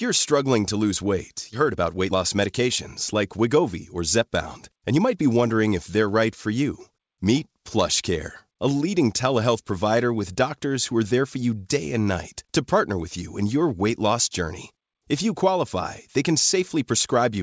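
Speech, heard through a call path whose spectrogram shows nothing above 8 kHz, which fits wideband G.722. Right after "struggling to lose weight", a skip ahead at 1.52–1.54 s drops roughly 0.7 s of speech. The waveform joins abruptly with no silent gap, and a spectrogram shows a hard vertical seam. Jitter buffer speed-up follows at 1.62–2.69 s (113%), 3.13–4.29 s (106%) and 4.70–5.23 s (108%, ending before "wondering if they're right"). Short pitch-period pieces are trimmed, so the speech sounds hurried at unchanged pitch, and the harmonic lines stay level while syllables compress.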